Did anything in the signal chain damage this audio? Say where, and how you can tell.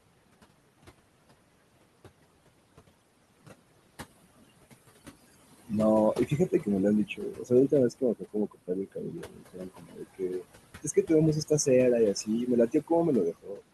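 Yes, the call-processing stage did it. There's overdone noise removal running the whole way through: the room noise, sitting about 15 dB under the speech, gets scrubbed to near silence with little twinkling specks, because bands near the noise estimate get switched off.

The same suppressor leaves classic noise suppressor artifacts throughout. It knocks the background down by about 21 dB between phrases, then lets it creep back under the voice as the per-band gains change frame to frame.

There's also speech cut by the noise suppressor at 6.27–6.67 s, 7.08–10.43 s, 10.83–11.10 s, 12.14–12.91 s and 13.32–13.63 s. Soft endings and quiet bits get swallowed, with dips of about 11 to 21 dB. The longest stretch loses roughly a second and a half of speech.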